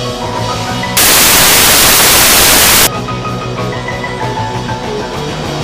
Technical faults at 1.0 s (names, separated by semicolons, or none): samples built from the wrong bytes